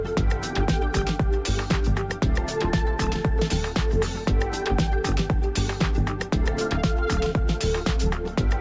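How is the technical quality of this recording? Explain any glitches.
No glitches turn up anywhere in this recording. Nothing interrupts or distorts the sound at any point.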